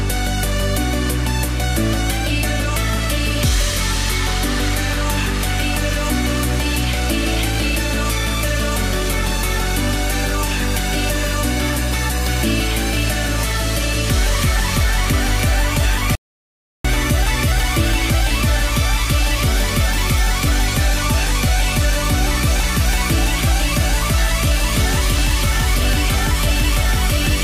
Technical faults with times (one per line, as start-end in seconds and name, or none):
16.15-16.85 audio dropout to silence